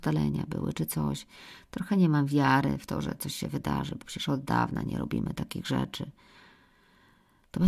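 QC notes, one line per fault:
No faults heard anywhere in the speech.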